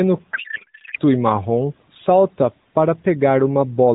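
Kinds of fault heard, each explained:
Codec payload misread: from 0.34 to 0.99 s, before "e marrom salta para", speech turns to garbled warble as AMR bits are unpacked in the wrong layout, fitting octet-aligned frames read as bandwidth-efficient.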